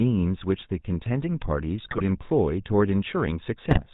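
Across the whole recording the speech has the buzzy, gravelly roughness of the GSM full-rate codec, which fits 13 kbit/s. Pulse-driven excitation and nothing above 4 kHz set it apart from plain band-limiting.

From 1.84 to 2.03 s, and again from 3.66 to 3.81 s, GSM bit errors corrupt the decoded filter, pitch and gain values. The voice breaks into squawks, pops and gargling rather than the silent gaps of dropouts.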